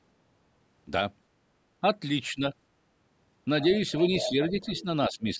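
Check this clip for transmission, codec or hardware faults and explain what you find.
Two echo-control faults show up in this speech, both tied to moments when the far end seems to be talking at the same time.

Speech suppressed in double talk: the voice ducks at 2.31 to 2.42 s, again from 4.29 to 4.88 s, and at 5.09 to 5.39 s. The first dip is about 10 dB, the middle one is shallower at about 5 dB and comes in patches, and the last is the deepest, near 15 dB. The likely cause is an echo canceller that couldn't tell the local voice from loudspeaker echo and turned everything down together.

Other side's voice leaking through: a second voice sits under the talker from 3.61 to 4.00 s, pops up much louder at 4.18 to 4.30 s, nearly level with the main speech, and returns faintly from 4.47 to 4.83 s. That last stretch overlaps the ducking, so the residue and the dips come together. This is likely loudspeaker sound reaching the microphone that the echo canceller failed to remove fully.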